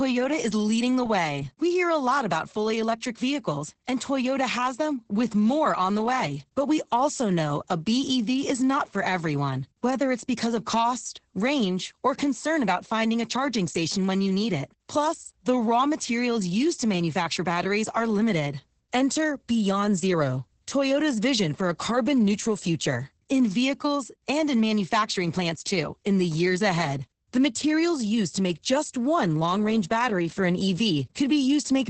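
Opus voice compression affects this speech clip from start to finish. The sound is muffled and hoarse, with a slightly robotic edge, and nothing is present above about 8.7 kHz. This points to Opus's SILK linear-prediction mode running at wideband at a very low rate, around 10 kbps. At that rate the coder has too few bits for the excitation signal, so it is quantised coarsely and the natural texture of the voice is lost.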